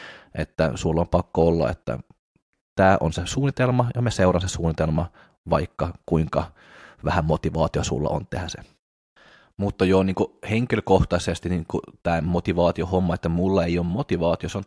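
No technical faults are audible.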